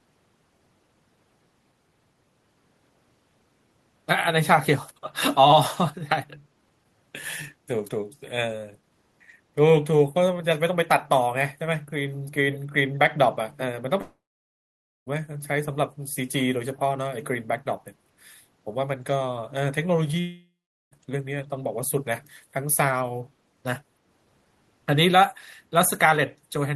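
At 12.52 to 12.59 s, a far-end loudspeaker's echo canceller likely let some of its microphone pickup through. The result is an echo leak: a brief, faint copy of the speech trailing 130 ms behind, well below the main level.

From 14.01 to 15.08 s, a long network dropout likely cut off the incoming audio. The receiver stretches the last sound into a fading buzz before about 0.9 s of silence. A second dropout from 20.20 to 20.93 s fades similarly into about 0.41 s of silence. Speech resumes with the gaps missing.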